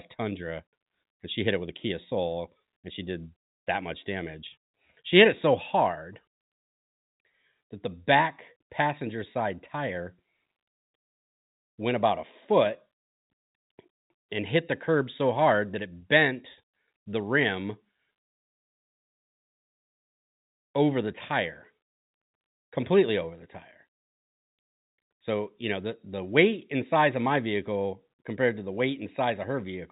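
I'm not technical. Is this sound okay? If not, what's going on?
Yes, this sound is okay; it has the slightly narrow tone of an ordinary phone line, but nothing is going wrong in it.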